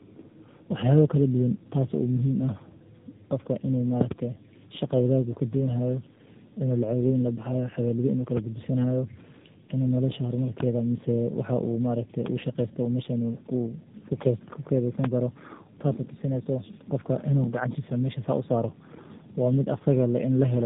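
Tandem speech coding throughout: G.729A output, passed through G.711 and then re-encoded by AMR-NB, compounds into rough, warbly speech with nothing above 3.8 kHz.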